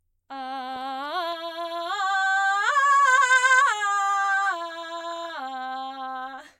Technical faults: channel delay (comb filtering)

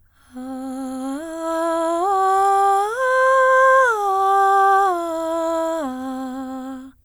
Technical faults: none

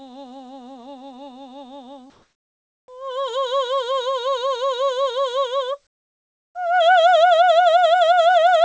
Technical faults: comfort noise in place of the background

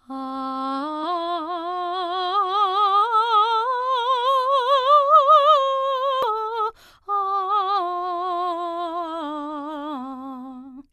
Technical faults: damaged data in a compressed stream

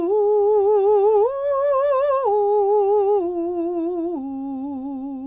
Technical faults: none

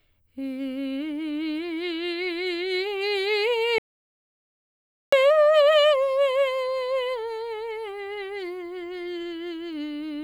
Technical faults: audio dropout to silence

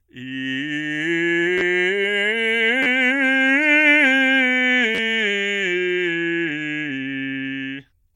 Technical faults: repeated buffer

